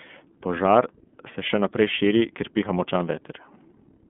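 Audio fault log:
throughout, iLBC codec: nothing above 3.7 kHz, and the speech sounds plainly rough and synthetic, which fits 30 ms frames coded independently at about 13 kbps.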